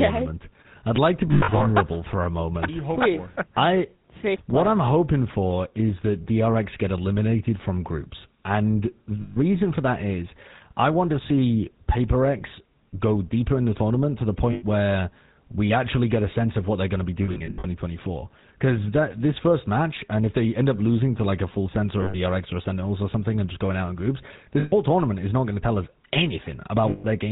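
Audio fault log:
Throughout: GSM full-rate codec. The speech has a buzzy, gravelly roughness, with nothing above 4 kHz, which fits a 13 kbps full-rate stream. The codec models the vocal tract with a filter and drives it with a sparse train of regularly spaced pulses, keeping only one in three excitation samples. That coarse excitation produces the plainly audible grit and buzz, and the 4 kHz limit removes the brightness.
1.28–1.61 s, 6.24 s, 9.22–9.37 s, 14.52–14.63 s, 17.24–17.66 s, 22.02–22.17 s, 24.60–24.73 s, 26.90–27.05 s: lost GSM frames. Each gap is a rough, metallic ring that holds. The first falls between "I'd like to" and "for a moment". Another falls between "the tournament to the" and "where we actually get". A third comes right after "they're going to be". The decoder replaces each missing frame with the last good frame's settings. The losses range from 20 to 240 ms. The first and fifth are scattered, with runs of up to about a tenth of a second.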